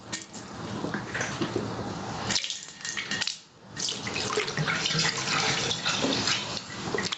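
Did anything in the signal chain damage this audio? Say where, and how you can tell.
Yes. There's gain pumping throughout: the gain swings by around 25 dB, so loud and quiet parts sit squashed together. The likely cause is input gain set far too high for the microphone, with a fast limiter or compressor clamping down on every peak. The band stopping at 8 kHz is just the Opus call path, consistent with roughly 32 kbps.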